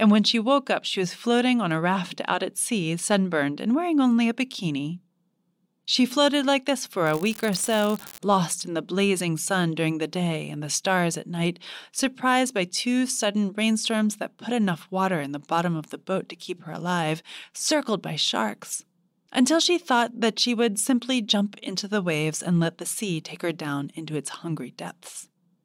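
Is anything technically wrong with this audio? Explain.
Yes. From 7.05 to 8.19 s, between "floated like this" and "lost in the blazing", the speech picks up a steady crackling fizz that sits on top of the words and carries through any gaps. This is an unreliable data bit. One bit line in the digital path is marginal, so a random share of samples come out with that bit flipped. Each flip adds a spike of identical size, here about -16 dBFS, and the scatter of equal spikes makes the steady crackle.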